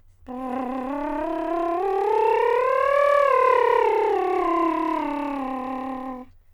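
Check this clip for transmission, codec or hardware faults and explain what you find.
No transmission, codec or hardware faults turn up in this music clip.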